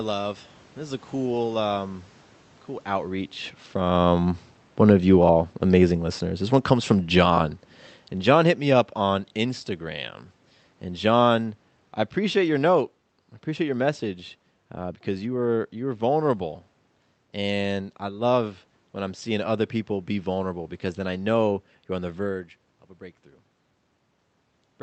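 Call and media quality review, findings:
Automatic gain falling, 3.77 s to 9.32 s, right after "cool um cool outreach". Level sinks by about 7 dB over roughly five and a half seconds. Probable component: send-side AGC, lowering gain after judging input too loud or its background noise too strong. Unlike the talker shifting position near 4 s, the room noise drops in step with the voice, so the whole signal is being scaled. Top end stops near 8 kHz, from the call codec's bandwidth.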